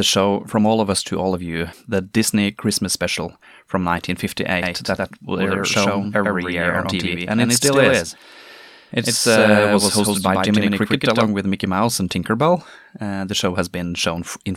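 Speech, with a doubled audio track running from 4.62 s to 11.26 s: a second full-band copy of the same speech sits about a tenth of a second behind the original, at roughly the same loudness, giving a hard slapback with no decay or room colour. The copy cuts in and out abruptly at those two points. The likely cause is the signal being captured twice, once through a slower path, or an edit leaving two offset copies.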